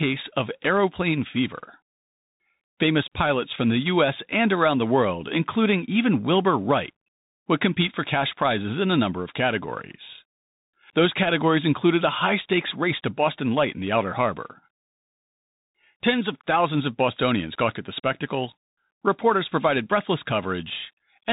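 Speech runs through a Bluetooth CVSD headset codec for its full length. Nothing above 3.8 kHz survives. The one-bit coder's adaptive step lags fast changes, leaving audible granular distortion, consistent with a 64 kbps link.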